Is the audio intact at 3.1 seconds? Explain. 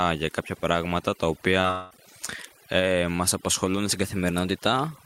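No, overdone noise removal affects the whole clip, including 3.1 s. Bands near the estimated noise floor are cut away, so the background drops and breaks up into twinkling specks, and quiet parts of the speech are cut away with it. A spectrogram shows scattered isolated dots and holes.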